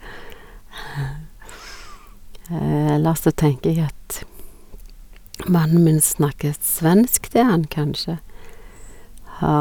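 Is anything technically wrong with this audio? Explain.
No, nothing technically wrong here.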